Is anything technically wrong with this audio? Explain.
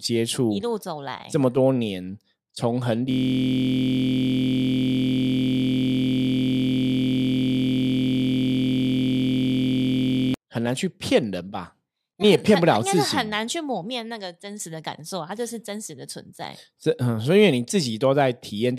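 Yes. From 3.11 to 10.34 s the speech turns into a steady buzz at about 43 Hz, a system hang loop. The system froze while the sound hardware kept replaying one 23.22 ms stretch of its ring buffer hundreds of times, which fits a 1024-sample buffer.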